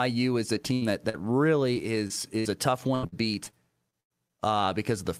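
Choppy, robotic speech from 0.73 to 4.31 s, after "is a": repeated packet loss, a dozen gaps up to 95 ms patched by extending earlier sound.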